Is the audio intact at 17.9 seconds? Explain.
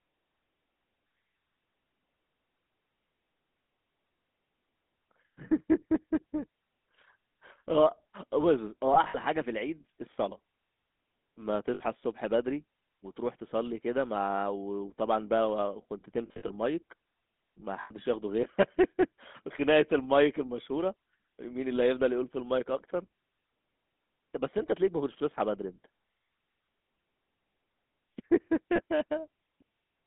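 No. From 17.82 to 17.92 s the sound breaks up with lost GSM frames. About 80 ms of data is missing, which fits four dropped 20 ms frames. The decoder fills the gap by reusing the parameters of the last good frame. The moment is held as a rough, metallic ring rather than dropping to silence, because a gap this short ends before the fade-out completes.

That moment also carries the GSM full-rate codec damage present across the whole clip. The codec rebuilds speech from a vocal-tract filter excited by regularly spaced pulses, and the coarse excitation gives a plainly audible buzzy, gravelly texture that fits the 13 kbps full-rate mode. The band runs from 200 Hz to 3.6 kHz, so the audio sounds thin, with no low end and no high-frequency detail.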